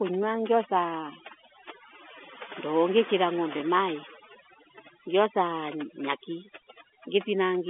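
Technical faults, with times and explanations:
Throughout, overdone noise removal: the noise reduction is set far too aggressively, so any frequency band that drifts close to its noise estimate gets pushed way down or cut out entirely. The background drops and breaks up into little twinkling specks, and the quieter parts of the speech get eaten too. That's on top of the narrow phone band of roughly 250 Hz to 3.5 kHz.
3.58 s, packet loss with last packet repeated: right after "ndoo ngikiria" there's a 20 ms hole that the receiver filled by replaying the previous packet. The repeated chunk is unlikely to line up with the pitch of the speech, so you get a small blip. It's over almost at once, which points to a single lost 20 ms packet rather than a longer run that would buzz.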